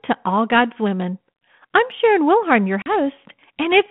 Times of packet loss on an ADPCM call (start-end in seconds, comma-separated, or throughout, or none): 2.82-2.90